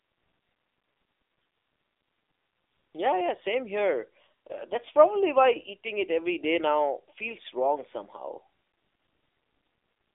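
Speech comes through thin, boxy and buzzy from start to end, with nothing above 3.7 kHz and a band of 300 Hz to 3.6 kHz. This is the AMR narrowband mobile codec: its vocal-tract model, driven by sparse pulses, sounds starved, which fits a low rate near 7.4 kbps.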